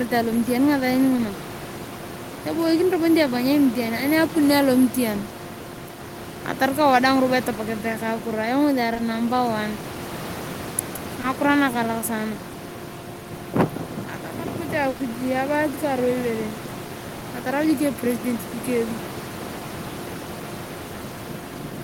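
Speech recording with short concealed packet loss at 2.39, 5.29, 8.93 and 8.97, 11.21, 14.97 and 17.19 s: roughly 20 ms gaps the receiver bridged by extending the preceding sound, heard as brief smears or wobbles. A burst of packet loss at 14.89 to 14.97 s drops about 60 ms, concealed by a decaying continuation before audio resumes. Room noise sits about 13 dB below the speech.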